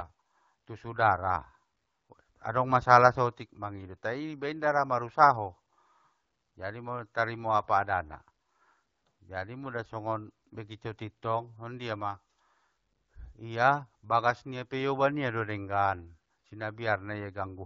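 Nothing stood out on listening to this speech clip.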